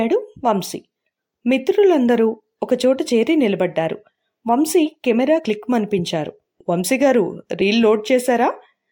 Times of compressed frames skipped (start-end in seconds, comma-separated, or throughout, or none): 5.38-5.40, 7.61